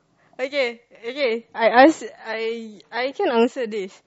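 From 1.20 s to the end, an adaptive stream at a lower bitrate takes over. A slowed connection forced a switch to a version that sounds like roughly 32 kbit/s MP3 instead of 128 kbit/s. The treble abruptly thins and codec artefacts rise, with no gap. A spectrogram shows the high band cut off sharply at that moment, while the waveform continues unbroken.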